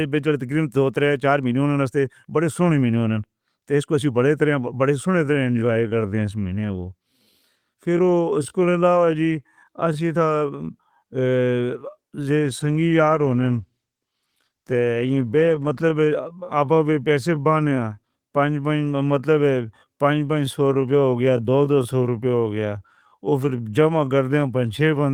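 From 5.09 s to the end, the speech slows to about 0.71 times its pace without any pitch change. This time-stretched section drags, likely from software repeating short pieces.

At 12.36 s a call bitrate drop sets in. The speech turns rough and watery until 15.91 s, which fits the encoder falling from 32 to 16 kbps.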